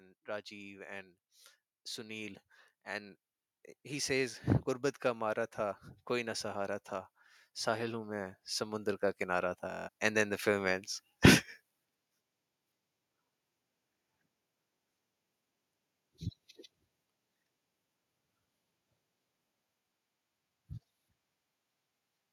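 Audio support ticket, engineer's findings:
Automatic gain rising, 7.64 to 10.88 s: level climbs about 6 dB over roughly three seconds, with speech and background noise swelling together. AGC in the capture path judged input too quiet and ramped gain. Waveform envelope widens steadily; spectrogram noise floor brightens evenly across all bands, not just speech.

Bluetooth stutter, 9.71 to 9.89 s, inside the gain ramp: buzzy machine-gun repetition, then speech resumes further on, as if it had kept playing. Link dropped or delayed packets and the receiver replayed its last buffer. About 209 ms missing, longest gap 162.5 ms. Waveform shows identical short blocks repeating; spectrogram shows a comb of vertical stripes, then a hard jump.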